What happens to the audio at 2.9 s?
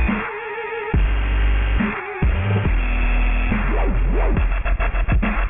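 At 2.9 s the audio has aliasing, and it is present for the whole clip, not just at this moment. Everything above about 3 kHz has been folded back down below that point. This fits a drop to a 6 kHz sample rate with no anti-aliasing filter first. The folded energy lands on unrelated pitches, about 15 dB below the main signal. High content sounds gritty and metallic, and the spectrum stops abruptly at 3 kHz.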